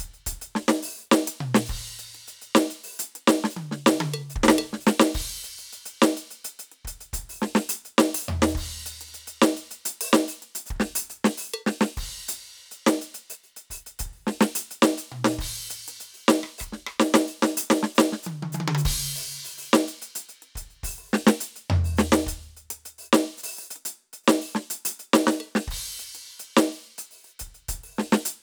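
Nothing goes wrong in this stretch of music; there are no technical faults to point out anywhere along the way.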